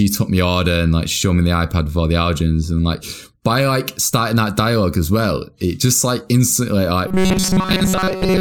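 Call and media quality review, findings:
Rigid metallic buzz from 7.08 s to 8.40 s, right after "it just like instantly". Fixed pitch near 188 Hz; speech contour only loosely followed. Robotic sound from repeated short buffers, likely audio arriving too seldom: a roughly 5 ms chunk looped, most real audio skipped.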